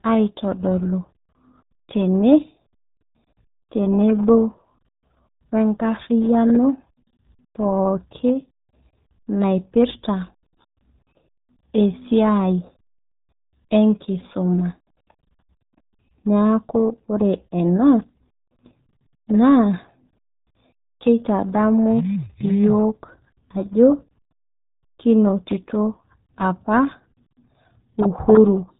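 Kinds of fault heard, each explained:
RealAudio 14.4 codec: the speech went through the dial-up-era RealAudio 1 coder at 8 kbit/s. This squeezes the signal so hard that nothing above about 3.8 kHz survives. The speech is muffled and band-limited throughout, with a heavy, gargly coding roughness across all 29 seconds.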